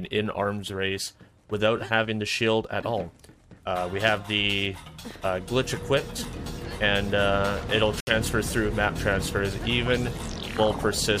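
At 8.00 s the sound drops to silence for about 67 ms, with the disturbance spanning to 8.12 s. This is likely a Bluetooth stall: interference delayed packets, the receiver's buffer emptied and playback waited for retransmission. Unlike a concealed packet loss, there is true silence, not smeared or repeated audio.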